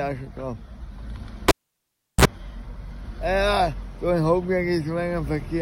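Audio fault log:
1.48–2.25 s, cable pulled and plugged in: a live lead is pulled and reseated, giving a pop, 0.72 s of near silence, 41 ms of 60 Hz buzz as the tip touches, then another pop.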